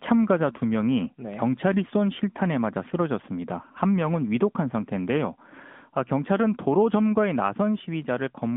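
Speech squeezed through an AMR narrowband mobile codec, the old 2G/3G phone path, running for the whole clip. The audio sits in a telephone band of roughly 150 Hz to 3.5 kHz, so there's no low body and nothing up top, and the coding damage is plainly audible: that buzzy, synthetic edge you get when a vocal-tract model rebuilds the voice from a handful of pulses per frame. The texture fits a mid rate around 10.2 kbps.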